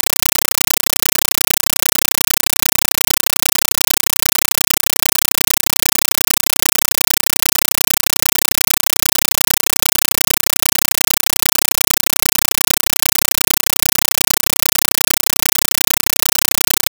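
From start to finish the speech is replaced by a compressed stream played as audio. An AC-3 (Dolby Digital) bitstream has reached the output as though it were ordinary PCM samples, with no decoder in the path. Each coded frame comes out as an 8 ms burst of noise followed by silent padding, repeating 31.25 times a second. The result is a very loud, chattering static, and the density points to roughly a 384 kbps stream.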